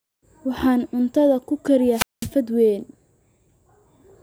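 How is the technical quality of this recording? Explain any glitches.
One glitch stands out: a wireless microphone squelch dropout from 1.91 to 2.31 s. The transmitter's radio signal weakens until the receiver's squelch shuts the output, so a short surge of hiss gives way to roughly 0.2 s of near silence before the speech comes back.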